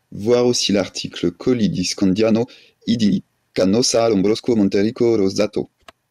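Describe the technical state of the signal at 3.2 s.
At 3.2 s, speech is inside a time-stretched section (1.95–6.10 s), rushed at 1.87 times speed, likely from dropped short pieces. Pitch holds, unlike a plain speed-up.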